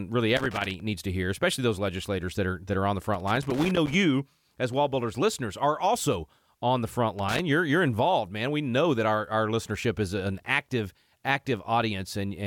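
Loose connector crackle breaks into the speech three times. It runs from 0.37 to 0.80 s, just before "needs to hear especially". It returns from 3.14 to 3.94 s after "that are on the". The last burst runs from 7.19 to 7.39 s, between "also on the front" and "you're you're involved man". A worn contact makes and breaks, chopping the signal. Each burst is heard as irregular scratchy crackle.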